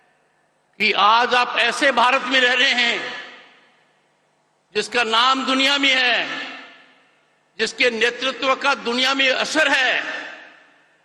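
Listening closely turned up nothing that stood out as a technical problem anywhere in the recording.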